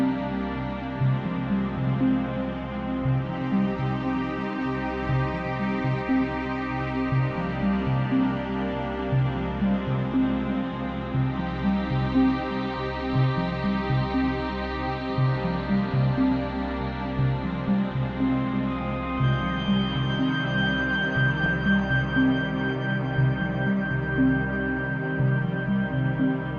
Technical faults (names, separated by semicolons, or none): MP2 compression; DAB burbling